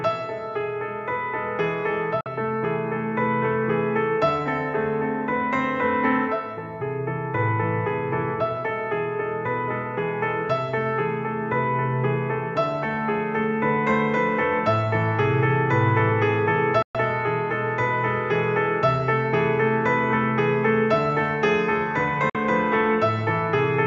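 Digital broadcast dropout at 2.21 s, 16.82 s and 22.30 s: the receiver lost valid frames and muted, so the sound snaps off with a 3 ms fade into silent holes of 48 ms, 120 ms and 48 ms, consistent with whole 24 ms frames lost.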